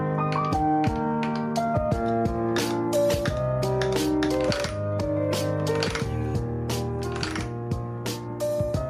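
Nothing is technically wrong with this audio, so there are no times or causes to report.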